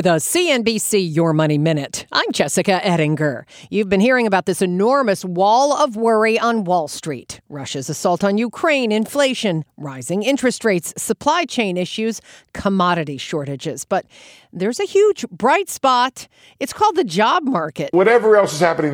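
A drift correction step runs from 5.98 to 6.99 s, just after "this enormous wall of". For about a second the speech plays roughly 5.5% fast and sits 92 cents sharp, close to a semitone, before snapping back to normal rate and pitch. The likely cause is clock-matching software that briefly raised the playback rate in a single jump to drain a buffer that had grown too full, shifting speed and pitch together.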